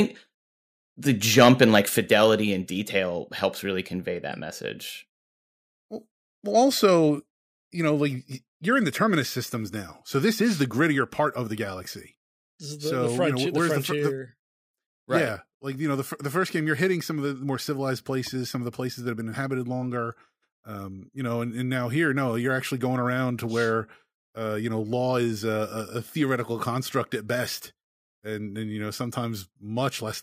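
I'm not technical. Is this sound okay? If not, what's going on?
No. From 1.38 to 1.79 s there is microphone overload: the loudest speech sounds harsh and crackly, likely because the microphone input was set too high.

Then comes microphone volume stepped down. At 1.98, 3.0, 6.87, 7.89 (just before "like you're in the"), 8.91 and 10.95 s the voice and background both suddenly get quieter. This is likely the call software turning the microphone down. Unlike the overload, these drops sound clean, just abruptly softer.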